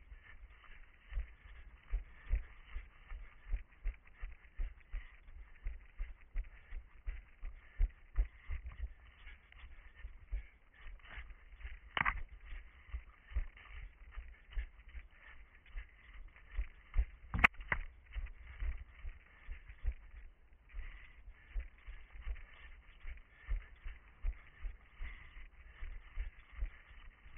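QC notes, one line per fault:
No faults were heard anywhere in the clip. The sound needs no QC note.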